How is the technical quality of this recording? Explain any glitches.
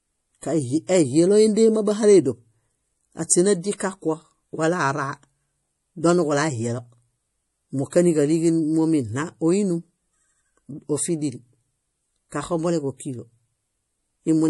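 Technical quality is noticeably degraded by compression damage that runs through the whole speech recording.

Throughout the clip, likely MP3 compression: the encoder seems short of bits, which fits a low bitrate around 48 kbps. It removes everything above 11.5 kHz and lets weak frequency lines drop in and out between frames, so the speech sounds dull, watery and swirly, with smeared attacks.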